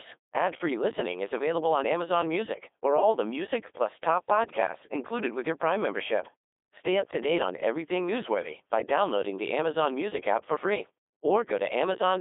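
Speech run through a Codec 2 vocoder from start to finish, and you can hear it right away: the voice comes out robotic and buzzy because the decoder rebuilds it from sine waves using only pitch, voicing, energy and a rough spectral envelope, so the original waveform is gone. The damage is heavy, the sound sits in a narrow radio-style band of roughly 300 Hz to 3.6 kHz with nothing above 3.8 kHz, and the texture fits a rate around 2.4 kbit/s.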